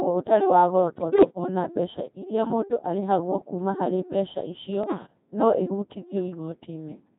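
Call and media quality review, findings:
Codec 2 vocoder, whole clip: robotic, buzzy synthetic speech, waveform not preserved. Parametric sine-wave resynthesis, heavy artefacts, consistent with a 2.4 kbit/s mode.

Bit errors on digital voice radio, 1.00–1.30 s and 4.84–5.06 s: pitch, level and timbre jumps, warbling gibberish. Likely a few percent of bits corrupted across whole vocoder frames.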